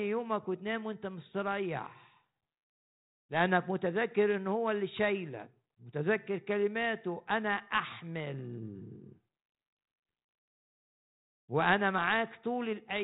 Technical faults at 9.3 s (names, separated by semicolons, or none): none